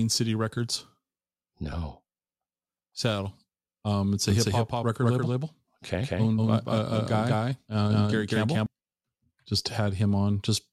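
A doubled audio track runs from 4.30 to 8.66 s: a second copy of the speech, at about the same level and roughly a fifth of a second late, cuts in and out abruptly, likely from the signal being captured twice through a slower parallel path.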